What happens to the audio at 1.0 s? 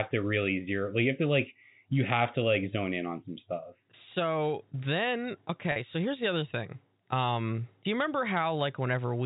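Nothing goes wrong at 1.0 s: the speech passes through intact, carried by G.711 telephone coding that limits it to the 4 kHz telephone band without any audible damage at that point.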